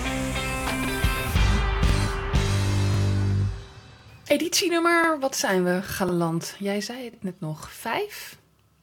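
Overlapping chunks appear at 1.90, 2.94, 3.99, 5.04, 6.09 and 7.13 s. The audio was handled in 1.0 s chunks, each starting about 48 ms before the previous one ended, so that slice plays twice at every join. Each join is heard as a brief stutter or click, recurring about every 1.05 s. On a waveform, the 48 ms segment appears duplicated back to back. On a spectrogram, each join shows a thin vertical seam with the preceding texture repeated.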